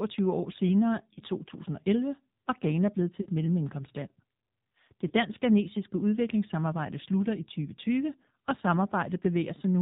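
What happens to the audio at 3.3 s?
Lost AMR speech frames cause a short gap from 3.22 to 3.28 s. The decoder reuses the last good pitch and vocal tract settings at falling gain. The sound is briefly smeared and dipped. Roughly 40 ms are lost, which fits two 20 ms frames.

Around that gap, the AMR narrowband mobile codec at 7.4 kbps colours the speech. Nothing passes above 4 kHz, so the sound is muffled. The low bitrate adds a plainly audible buzzy, synthetic quality from the modelled vocal tract.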